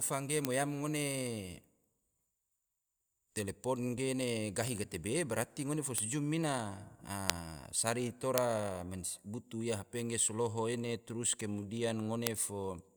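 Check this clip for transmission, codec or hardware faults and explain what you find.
A bit error spike recurs at 0.45, 4.68, 5.98, 7.30, 8.38 and 12.27 s. Each time, a flipped bit throws a sample or a few by a power of two before the signal returns. Each event is a single sharp broadband tick unrelated to the speech, peaking at about -21 dBFS at 4.68 s, about -9 dBFS at 0.45 and 5.98 s, and about -3 dBFS at the other three.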